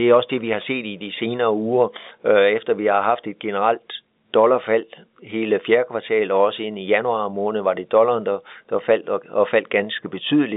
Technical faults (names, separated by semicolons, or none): none